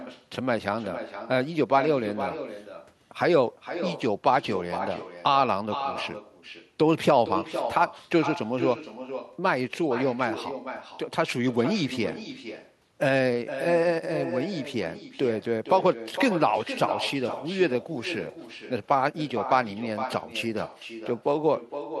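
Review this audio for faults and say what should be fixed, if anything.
Echo with no canceller runs through the whole clip: the far end's loudspeaker output is re-captured by its microphone and sent back unremoved. Every phrase of speech returns about half a second later as a thinner copy about 10 dB quieter. Enabling acoustic echo cancellation at the far end, or having that side use a headset, would stop it.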